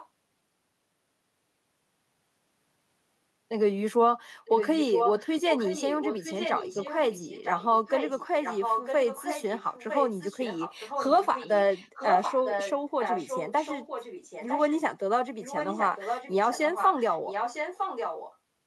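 A far-end echo canceller likely failed to remove its loudspeaker pickup, so an echo leak returns the speech 956 ms late at 0.0–0.07, 4.45–5.3, 5.5–7.67, 7.86–8.27, 8.43–12.72, 13.01–14.75 and 15.41–18.37 s. The echo ranges from about 20 dB below the speech to about equal with it.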